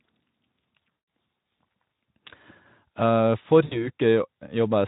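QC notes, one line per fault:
0.91–1.07 s and 3.65–3.89 s, VoIP packet loss concealed by the speech codec: packets went missing and the decoder filled the gaps by extending its last pitch and spectral envelope at falling gain, so the sound smears into a buzzy tone or a coloured noise that fades. The first gap, about 160 ms, fits eight lost 20 ms frames. The second loses about 60 ms, but the sound stays weak for tens of milliseconds or more after 3.89 s while the decoder's state recovers, against the light Speex coloration of the rest.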